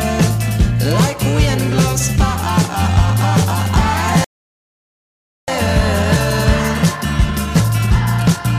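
At 4.24 s the sound cuts out in mid-flow and stays silent until 5.48 s, a gap of about 1.24 s. This is a playback stall, most likely the player running out of buffered data or having its output thread blocked.

From 5.48 s to 8.48 s the audio runs hurried, at about 1.1 times normal speed. This is time-compressed catch-up: the player shrinks the backlog left by the stall by cutting out tiny slices and cross-fading over the joins. The pitch stays where it was. That rules out a simple resampled speed-up, which would raise the pitch along with the tempo.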